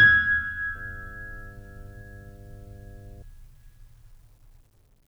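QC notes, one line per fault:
0.75–3.22 s: mains hum, a steady 50 Hz tone with low harmonics about 20 dB under the music, from power-line coupling through a ground loop or transformer.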